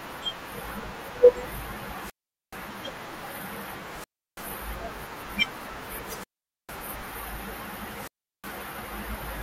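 Speech with four wireless microphone squelch dropouts at 1.99–2.61, 3.87–4.54, 5.99–6.91 and 7.88–8.62 s: the FM signal fades, hiss rises, then the receiver squelch mutes for roughly 330 to 450 ms.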